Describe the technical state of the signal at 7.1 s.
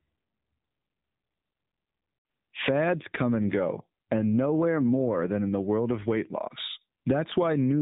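At 7.1 s the speech carries AMR narrowband mobile codec damage throughout. Nothing above 3.8 kHz survives. The synthetic, buzzy texture suggests a low bitrate near 8 kbps.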